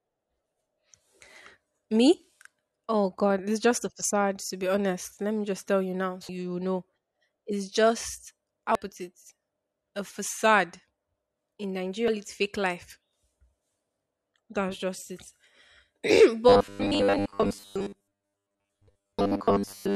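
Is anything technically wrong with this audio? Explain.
Yes, there are two kinds of fault in this speech clip.

Damaged data in a compressed stream occurs twice: at 8.75 s, between "is just" and "put it", and at 12.08 s, just before "it fake life". At each point part of the encoded stream is corrupt, so the decoder misreads the frame, loses sync and hunts for the next valid header. The listener hears a very brief blip or chirp.

Robotic sound from repeated short buffers runs from 16.49 s to the end. The likely cause is audio arriving too slowly, with the playback software refilling the gaps by repeating the last short block, here about 10 ms long. Most of the sound in this stretch is those repeats rather than new audio, so a rigid 100 Hz buzz is imposed on the voice. The speech becomes metallic and mechanical while still loosely following the words.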